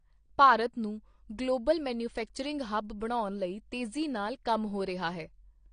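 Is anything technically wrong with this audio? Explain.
Yes, there's AAC compression throughout: nothing above about 9.7 kHz, and the speech sounds dull and smeared, likely from a low-bitrate encode around 32 kbps.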